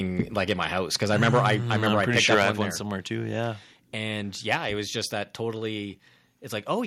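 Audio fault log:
0.19–0.65 s, 1.1–2.51 s and 4.51–4.55 s, microphone overload: the loudest moments get a harsh, crackly edge. The first burst ends right before "house because", the second runs from just after "house because" up to "one one somewhere too", and the short third one lands just before "it was just that". The peaks go over by about 4, 9 and 4 dB, so their tops are sliced flat. Likely cause is the mic input gain set too hot for the converter.
1.35 s and 2.43 s, microphone volume stepped down: the level drops abruptly, by about 2 dB and then about 5 dB, and the voice and the room both get quieter together. Both drops fall inside that long distorted stretch, the second right near its end. That pattern likely comes from the call software catching the clipping and pulling the device input gain down in one step each time.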